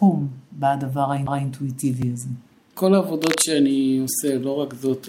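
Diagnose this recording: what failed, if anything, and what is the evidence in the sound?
The playback stage failed first: a CD skip at 1.27 s. The laser lost its track and landed on another turn of the disc's spiral, so there is a brief mute of about 10 ms, and the sound resumes from a different place on the disc.

At 2.02 s there is a gap between stream segments, in the network or streaming stage. The timestamps of two 2.0 s segments don't meet, and the player fills the 3.5 ms hole with silence. The result is a hard-edged dropout, though no audio is lost.

From 3.24 to 3.43 s there is cable scratch noise, with dense, uneven, rustling bursts at roughly 5 dB below the signal. The likely cause is analogue wiring: a worn cable, connector or control being moved, whose contact resistance fluctuated rapidly.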